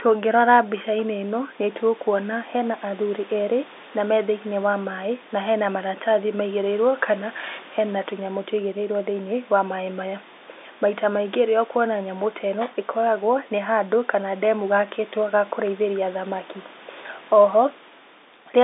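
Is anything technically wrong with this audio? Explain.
No, nothing is technically wrong with this audio.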